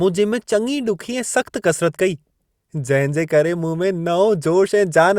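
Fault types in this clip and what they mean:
Nothing stood out as a fault on listening to this speech recording.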